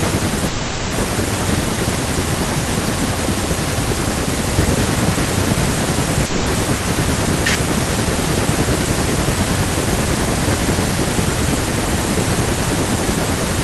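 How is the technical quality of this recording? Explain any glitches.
The recording has two glitches, both typical of a network call.

From 0.47 to 0.94 s the speech halts and a fading buzz fills about 450 ms. It then resumes where it stopped, with nothing lost. This is likely a call audio freeze: delayed packets emptied the jitter buffer, pushing everything later by about 450 ms.

From 6.26 to 6.48 s a similar fading buzz covers about 200 ms. This time the speech returns further on, with roughly 200 ms gone. That points to a likely long network dropout, where the missing packets never arrived and were never played.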